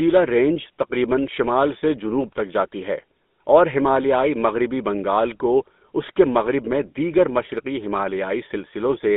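From start to finish the speech carries plainly audible GSM full-rate codec damage: a buzzy, gravelly roughness from the coder's coarse pulse excitation, squeezed into a line band of about 200 Hz to 3.6 kHz. That fits the old 13 kbps GSM full-rate phone codec.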